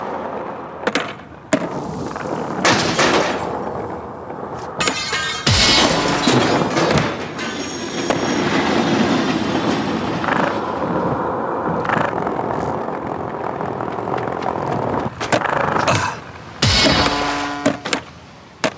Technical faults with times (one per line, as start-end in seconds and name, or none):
0.00-18.77 gain pumping